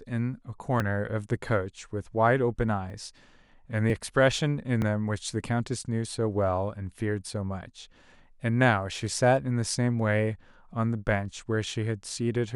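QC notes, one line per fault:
0.8, 2.9, 3.9 and 4.82 s: dropped buffer (overrun). The speech skips forward with no gap, losing a sliver of about 20 ms, roughly double that at 4.82 s. Likely the samples were overwritten before being read, joining the remaining audio directly.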